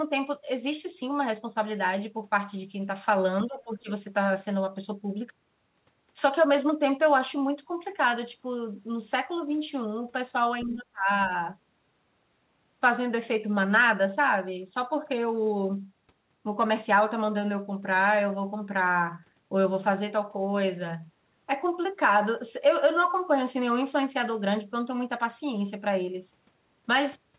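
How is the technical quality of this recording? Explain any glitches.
Three short glitches stand out in this call-path speech, all around moments where the two ends of the call overlap. The audio is band-limited to 4 kHz, which fits a narrowband G.711 A-law call codec at 64 kbps.

Speech suppressed in double talk occurs from 3.46 to 3.89 s and again from 10.65 to 11.1 s. Each time the talker's level sags for roughly 400 ms: by about 15 dB in the first instance and about 25 dB in the second. The likely cause is an echo canceller that could not separate the near talker from loudspeaker echo while both were active, so it attenuated everything.

The other side's voice leaking through appears from 10.61 to 10.77 s, just as the second suppression begins. A faint second voice sits at roughly 25 dB below the talker, brief. The likely mechanism is residual loudspeaker echo that the canceller failed to fully subtract from the microphone signal.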